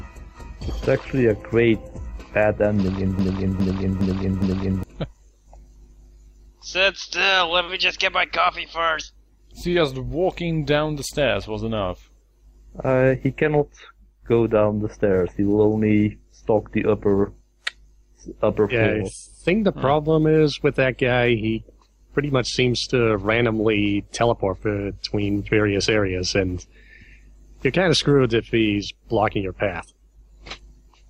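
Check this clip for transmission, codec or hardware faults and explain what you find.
One fault is present: a broken-record loop from 3.19 to 4.83 s. The likely cause is a stall somewhere in the chain, in the player, encoder or stream, that kept outputting the last fragment it held instead of new audio. A 0.41 s slice of sound repeats identically four times, back to back, giving a stuttering, mechanical cycle. Whatever should have played during those 1.6 seconds is missing.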